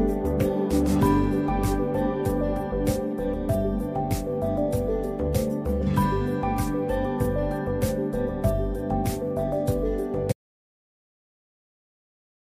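The input feed was likely lost, with the recorder continuing to write zeros, causing an audio dropout to silence from 10.32 s to the end of the clip. The sound cuts off abruptly mid-flow, leaving about 2.2 s of silence without even room tone.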